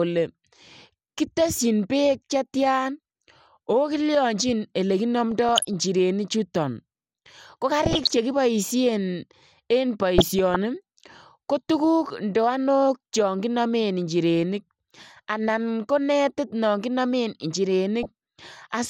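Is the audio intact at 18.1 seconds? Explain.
No. From 18.03 to 18.12 s there is DAB burbling: bit errors slipping past error correction corrupt sub-band samples and scale factors, producing brief blips of noise in single sub-bands and sub-bands jumping in level. Underneath, the dull, gurgly, granular texture heard throughout is MP2 compression, with upper sub-bands dropping out, likely from a bitrate around 80 kbps.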